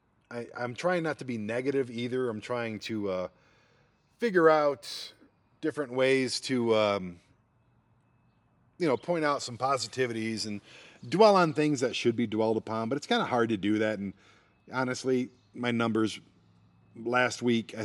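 From 2.76 to 5.50 s, imaging from linear upsampling appears. The speech points to a 24 kHz source raised to 48 kHz by straight-line interpolation, a weak filter, so the top of the band dulls and a mirrored copy between 12 and 24 kHz, roughly 35 dB down, adds faint metallic shimmer to sibilants.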